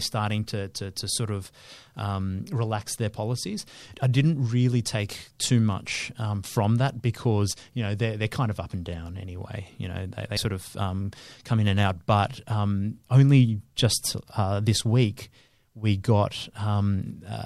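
At 10.36 s, compressed frames are skipped. The decoder never plays a short run of frames, around two frames of 24 ms each. The sound jumps ahead by roughly 50 ms.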